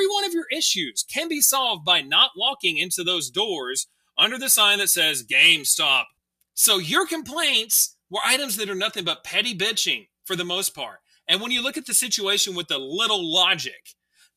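From 3.86 to 4.18 s the noise suppressor mistook the sound for noise and pulled it down by about 20 dB, so that third of a second sinks in level.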